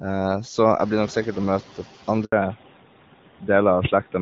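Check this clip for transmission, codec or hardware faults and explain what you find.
Two transmission faults are audible, both around 2.3 s.

A handover gap runs from 2.24 to 2.32 s. The call switched networks and no speech frames arrived for 80 ms. The voice dies away within a few tens of milliseconds and goes silent until the new link picks up. Anything spoken in that window is lost.

A fallback to narrowband follows from 2.32 s to the end. After the handover the call left HD Voice for an older codec. The change fits a drop from AMR-WB at 12.65 kbit/s to AMR-NB at 12.2 kbit/s. Nothing above 4 kHz remains, so the speech sounds duller and rougher.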